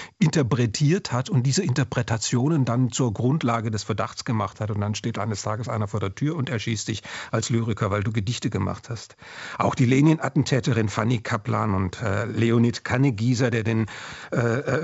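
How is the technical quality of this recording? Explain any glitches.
No glitches or faults heard.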